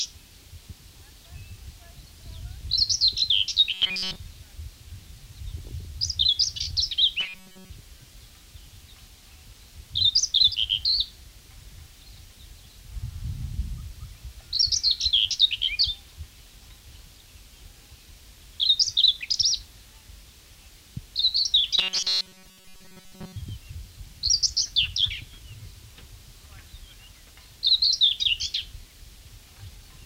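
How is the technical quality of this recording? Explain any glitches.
The recording has two kinds of glitches: a metallic, robotic buzz in three places and one brief spell of bubbling distortion.

Robotic sound from repeated short buffers: from 3.74 to 4.16 s, 7.20 to 7.70 s and 21.79 to 23.36 s, the sound turns rigid and mechanical, with a steady 188 Hz buzz imposed on it. The likely cause is new audio arriving too late. The playback repeats its last fragment, about 5.3 ms long, so the sound is stamped with a fixed pitch while the real audio is skipped. In the first and last stretches most of the sound is replaced this way, and in the middle one all of it.

DAB burbling: at 10.52 to 10.63 s a short burst of digital burbling sits over the sound. Weak digital radio reception let a small fraction of a percent of bits arrive wrong and slip past error correction into the compressed audio. Corrupted samples put short blips of noise in individual frequency bands, and corrupted scale factors make bands jump in level. 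The length of the burst suggests about five damaged frames.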